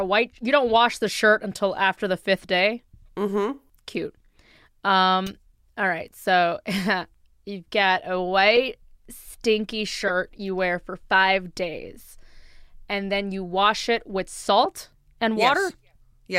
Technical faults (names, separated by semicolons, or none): corrupt frame decoded